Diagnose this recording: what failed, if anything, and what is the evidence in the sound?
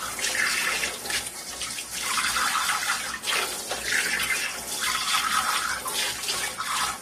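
Transcoding between lossy codecs, throughout the clip, at the codec stage: nothing is present above 14 kHz, and two distinct families of compression artefacts sound together. The likely cause is a low-bitrate MP3-style encode re-encoded as AAC-LC, the second codec spending bits on the first one's damage.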